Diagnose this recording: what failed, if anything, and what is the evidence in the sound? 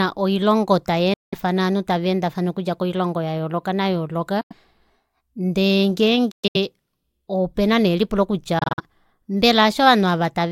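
The speech cuts to silence four times, with hard edges, and each time picks up further along as if it had kept playing. The gaps are at 1.14 to 1.35 s (about 186 ms lost), 4.41 to 4.53 s (about 93 ms), 6.31 to 6.56 s (broken into several holes, the longest 116 ms), and 8.59 to 8.80 s just after "opena nee elipulo" (scattered holes, the longest 46 ms). This is likely a Bluetooth dropout at the playback link: packets missed their delivery deadline and were discarded, which fits whole frames of roughly 23 ms each going missing.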